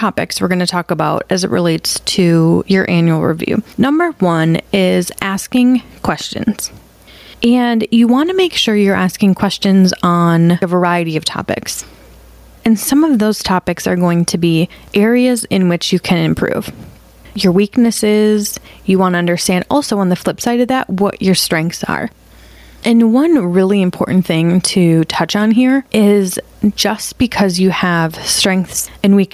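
Gain pumping runs throughout the speech: the gain swings by roughly 15 dB, pulling loud and soft parts closer in level and squashing the sound, likely from excessive gain hitting a fast limiter, unlike a gate, which silences gaps.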